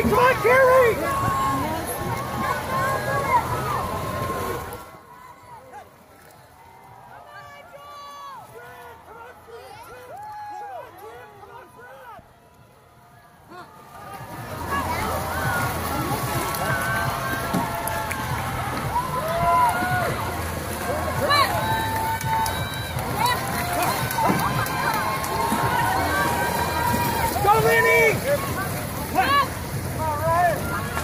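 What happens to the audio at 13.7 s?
At 13.7 s the audio is in a stretch of zipper noise running from 13.48 to 14.85 s. A level change of around 20 dB is applied in unsmoothed 3 dB steps, about five a second, and each jump puts a small click into the signal. The result is a ticking, zipping texture riding on the sound. Unlike random crackle or dropout clicks, these ticks are evenly paced and each one coincides with an audible step in loudness.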